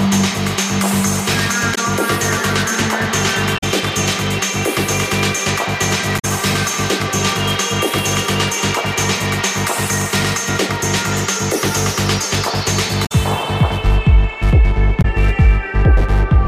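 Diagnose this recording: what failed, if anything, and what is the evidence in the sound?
Codec stage: damaged data in the compressed stream gives brief glitches at 1.71, 3.54, 6.15, 13.02 and 14.98 s, each under 0.1 s, as the decoder misreads frames and resyncs.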